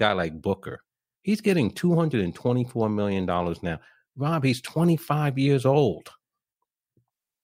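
There are no technical faults to describe in time order anywhere in the speech clip.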